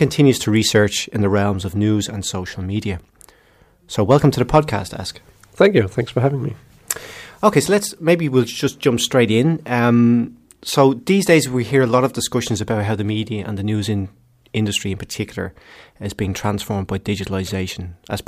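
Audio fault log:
4.11–4.59 s, hard clipping: the speech overdrove a stage by about 3 dB, so peaks were cut flat, adding high harmonics heard as crackle on loud syllables.
17.46–17.49 s, repeated frames: a 26.1 ms block, which fits a single compressed frame, played twice, adding 26.1 ms and causing a brief stutter.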